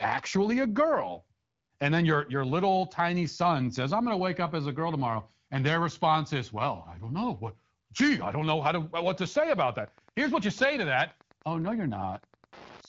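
From 9.08 s to the end of the clip, Wi-Fi interference appears. A nearby Wi-Fi radio's transmissions are picked up and rectified by the audio circuitry, leaving a steady tick that repeats every 102.4 ms, the radio's beacon interval, so roughly ten clicks per second. The ticking sits faint, well below the speech. The band-limited, lightly coded quality of the speech, with nothing above 7.5 kHz, fits AMR-WB HD Voice at around 12.65 kbit/s.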